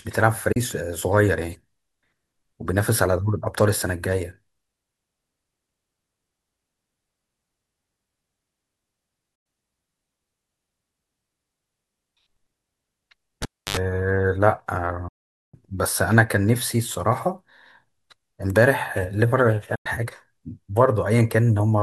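At 0.52 s the speech briefly vanishes in a digital broadcast dropout. The receiver muted for about 32 ms, with an 8 ms fade at each edge, which fits losing a single frame whose data failed to arrive intact. The same hole returns at 9.35 s, 15.08 s and 19.75 s, lasting 96 ms, 448 ms and 96 ms. Those lengths are whole multiples of 32 ms, pointing to three, fourteen and three lost frames. Each gap is dead silence with soft edges and no click or hum, and the speech resumes further along rather than picking up where it stopped.

Between 13.42 and 13.77 s comes a cable pulled and plugged in, heard quite differently. A pop opens roughly 300 ms of near silence, then about 77 ms of 50 Hz mains buzz as only the plug tip makes contact, and a second pop brings the speech back. The pops and the buzz set it apart from the clean, faded muting of the dropouts.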